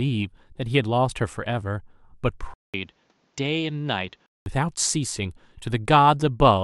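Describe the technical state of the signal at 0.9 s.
At 0.9 s the signal is intact, with no audible fault at that moment.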